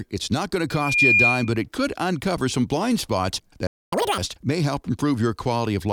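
From 0.70 to 1.58 s, after "it's not going", loudspeaker feedback squeal takes over. The loop through the microphone and speaker runs away at 2.4 kHz, swelling over about a third of a second to around 10 dB above the speech. A spectrogram shows one bright horizontal line.

At 3.67 s, after "uncover some blind spots", the sound cuts out for 0.25 s. This playback stall likely came from the player running out of buffered data. The waveform shows a flat, empty gap, and the spectrogram shows a blank vertical band.

From 3.93 to 4.18 s the catch-up at higher speed follows, ending before "may help". The player runs its backlog at double speed, so the audio is hurried and pitched up nearly an octave. On the spectrogram the harmonics jump upward and spread apart, then drop back.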